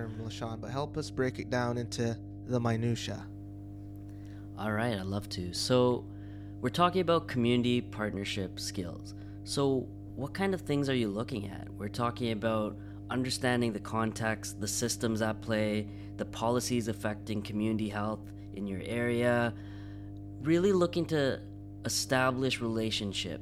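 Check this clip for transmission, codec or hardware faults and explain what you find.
One fault runs through the whole speech recording: mains hum. A steady low drone sits under the talking from start to finish, strong enough to stay audible in pauses, roughly 15 dB below the speech. It is pitched at 50 Hz, so power-line current has leaked into the signal path, most plausibly through a ground loop or a nearby transformer.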